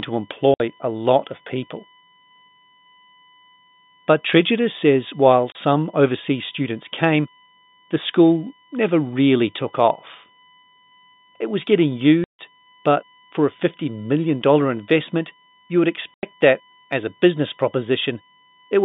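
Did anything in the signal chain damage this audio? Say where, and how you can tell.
Yes. In the analogue wiring or power path there is USB whine: a steady, fixed-pitch tone at 1 kHz runs under the speech for the whole clip, roughly 40 dB below it. A 1 kHz line matches the 1 ms frame rate of a USB bus. The current drawn in each frame leaks into the audio through shared power or ground, so the tone does not follow the speech.

On the network side there is packet loss filled with silence. It occurs four times: 0.54–0.60 s (60 ms, just before "a lot of people"), 5.52–5.55 s (30 ms, between "says while" and "overseas students came the"), 12.24–12.39 s (150 ms, between "was getting" and "but for"), and 16.14–16.23 s (90 ms). Each gap has hard edges, and every length is a multiple of 30 ms, which fits 30 ms packets. The receiver inserted silence rather than concealing the loss. The G.711 telephone coding band limit is audible but is not the cause.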